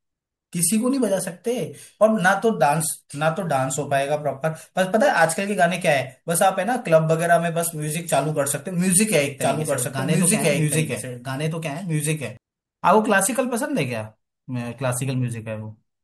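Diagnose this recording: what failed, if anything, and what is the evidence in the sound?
You've got a doubled audio track from 9.41 to 12.37 s. A second copy of the speech runs right alongside the original, trailing by roughly a second and a half and sitting at about the same level, so two overlapping streams talk over each other. There's no room tail or tonal change on the copy, and it cuts in and out abruptly at both ends. The likely culprit is a second, slower capture path feeding the same mix or an edit stacking two offset copies.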